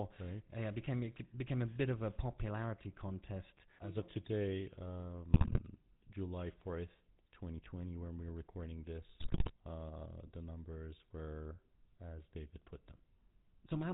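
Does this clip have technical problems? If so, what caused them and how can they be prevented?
Yes. The whole clip has the sound of the GSM full-rate codec. Nothing above 4 kHz survives, and the speech has a buzzy, gravelly edge because a vocal-tract model is driven by sparse, regularly spaced pulses. That fits a 13 kbps full-rate GSM path. A wideband codec would prevent this.

GSM bit errors hit twice, from 5.30 to 5.61 s and from 9.20 to 9.53 s. There the speech breaks into squawks and gargling as corrupted filter, pitch and gain values bend the spectrum and level frame by frame. The second burst is rougher, fitting an error rate near 5%. A stronger radio link or better error protection would prevent it.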